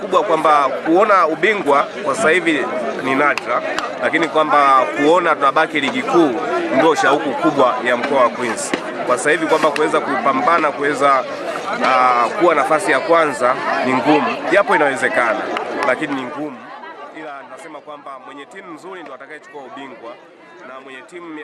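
No technical faults can be heard anywhere in the audio. Where the level moves, it rises and falls smoothly, like a fader being eased up and down.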